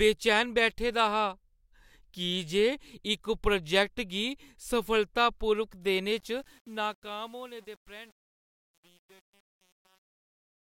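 After "गी सफलतापूर्वक देने", the fade-out from 6.16 s shows truncation distortion, fitting an 8-bit undithered stage. From 6.44 s to 10.63 s it turns gritty.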